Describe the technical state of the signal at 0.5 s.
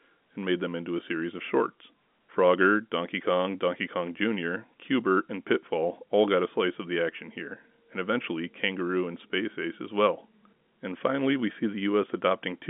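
At 0.5 s the signal is intact, with no fault present, only the narrow telephone band of G.711 telephone coding, which passes nothing above about 3.8 kHz.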